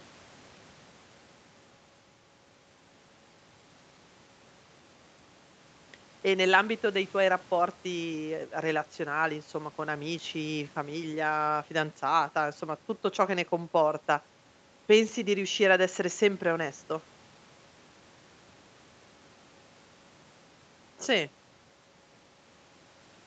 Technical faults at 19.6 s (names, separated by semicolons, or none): none